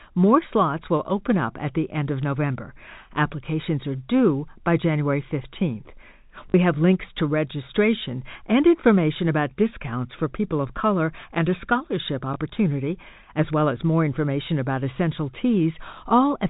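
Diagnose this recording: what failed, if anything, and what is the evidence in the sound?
A short robotic stutter at 6.50–6.54 s and a small blip at 12.34–12.36 s. This is network-stage packet loss with the last packet repeated: the receiver replayed the previous 20 ms chunk (twice in the longer gap), out of step with the pitch.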